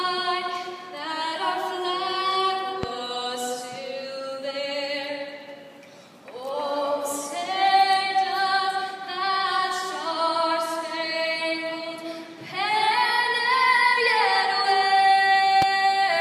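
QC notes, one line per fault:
2.83–2.86 s and 15.62–15.64 s, loud pop: single sharp pulse about 15 dB above the sound, which continues underneath unlike a dropout gap, likely a voltage transient from a switch or static.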